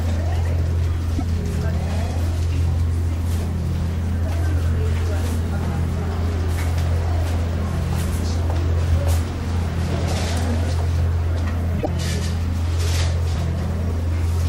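Corrupt frame decoded at 1.12 to 1.22 s, 4.28 to 4.32 s and 11.75 to 11.87 s: damaged compressed frames were played anyway, misplacing energy across a few frames each time. Each is a brief chirp, squeak, blip or burst of noise, the first and last louder, the middle one fainter.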